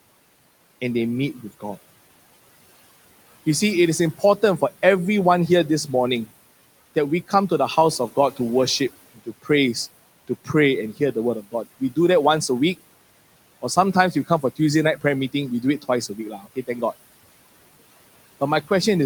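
Speech cut by the noise suppressor at 9.16–9.5 s (about 18 dB drop), 14.12–14.59 s (about 14 dB) and 16.09–16.69 s (about 11 dB): the suppressor mistook brief stretches of speech for the room noise sitting about 21 dB below, swallowing them. On a spectrogram these show as sudden faint gaps; the waveform envelope dips abruptly.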